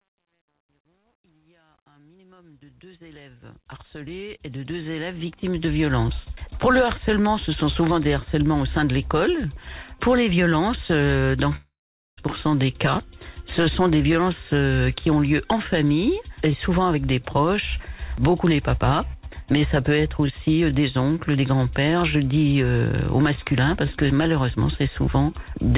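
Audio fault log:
0.00–5.99 s, truncation distortion on a fade: The fade-in from silence keeps only about 10 bits and has no dither, so the lowest-level stretch is gritty. It is worst from 0.00 to 3.68 s, before the level rises clear of the coarse steps. On the waveform the quiet start shows blocky, stair-stepped shapes. The spectrogram shows a broadband speckle of distortion up to the 4 kHz ceiling of the call path.
11.56–12.19 s, long network dropout: About 0.62 s of audio is missing. The gap is first filled by a continuation of the preceding sound that fades away, and then about 0.48 s of silence follows before the audio resumes further along, with the lost part never heard. This is likely a long run of packets that never arrived. The waveform shows a decaying, repetitive tail, then a flat line. The spectrogram shows smeared horizontal streaks that fade into a blank column.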